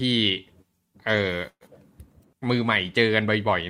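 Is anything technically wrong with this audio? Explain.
Yes. From 1.49 to 1.63 s the speech stalls. The last sound stretches into a fading buzz, falls silent for 50 ms, then resumes with nothing lost, 116 ms late. This call audio freeze likely came from delayed packets draining the jitter buffer.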